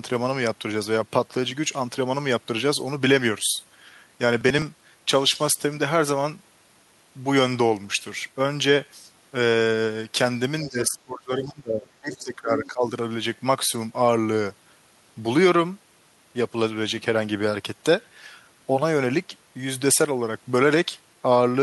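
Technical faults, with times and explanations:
4.41 to 4.62 s, processor overload crackle: for about a fifth of a second the speech turns gritty and torn, as the processor falls behind and misses a run of short buffer deadlines, roughly seven of them, which fits buffers of around 10 ms. Each missed buffer is simply skipped, so the audio jumps forward with a hard edge at every miss. On a waveform this shows as a cluster of abrupt discontinuities; a spectrogram shows thin vertical broadband streaks stacked closely across the span.
10.64 to 12.85 s, speech suppressed in double talk: for about two seconds the talker's speech dips, thins and drops out in pieces, at its deepest around 20 dB down. This is likely an echo canceller that could not tell the near talker from loudspeaker echo while both sides spoke at once, and so attenuated everything. On a waveform the envelope sags and chops into uneven chunks; a spectrogram shows the speech energy fading, with the upper harmonics vanishing and gaps appearing.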